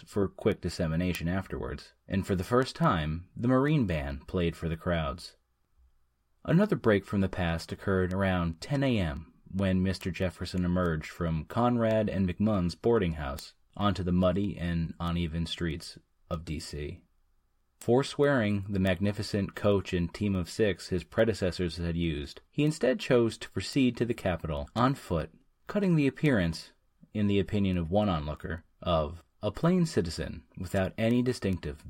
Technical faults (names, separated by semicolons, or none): word clock ticks